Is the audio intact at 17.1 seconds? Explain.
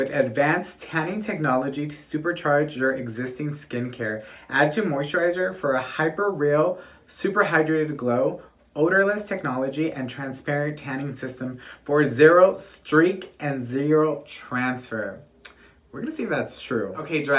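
Yes, the audio is intact at 17.1 seconds, with no dropout, glitch or other fault at that point.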